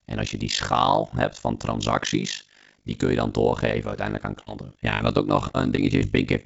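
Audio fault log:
Throughout: overlap-add ripple. The speech was split into windowed frames and rejoined with an overlap that does not add up to constant gain, so the level dips by about 60 dB once per frame, around 50 times a second, giving a rough flutter over everything.
3.50–3.54, 3.90–3.94, 5.76–5.80 and 5.98–6.03 s: short concealed packet loss. About 20 ms of audio, and about 40 ms in the last case, never arrived in time. The receiver extended the preceding sound and blended back, heard as a brief smear or wobble.
4.40–5.02 s: repeated packet loss (robotic sound). Four separate gaps, the longest about 66 ms and together about a quarter of this stretch, were each patched by continuing the last sound. Patches come in quick succession, so the speech turns choppy with pieces missing.
5.48–5.56 s: burst of packet loss. About 60 ms of consecutive audio was lost. Concealment held the last sound and faded it as the gap lengthened, giving a short held buzz or hiss. 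The speech then resumes with that stretch gone. The G.722 call path leaves nothing above 8 kHz.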